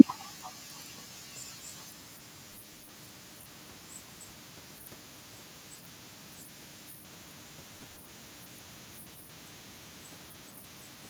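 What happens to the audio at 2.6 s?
Processor overload crackle runs from about 2.49 to 2.94 s, covering the 2.6 s mark. The processor could not finish its short audio buffers, each around 5 ms, before their deadlines, and dozens of misses came in quick succession. Each miss replayed a fragment of stale audio with hard edges, so the speech is overlaid with a gritty, tearing crackle for nearly half a second before it stops.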